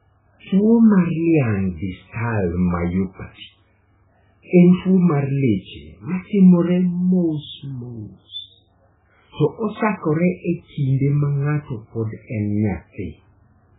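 A speech clip with heavy MP3 compression damage throughout. Nothing is heard above 3.8 kHz. Weak frequency lines flicker in and out, giving a watery, swirly texture and chirpy s sounds. The likely cause is MP3 encoding at a very low bitrate, fitting roughly 8 kbps.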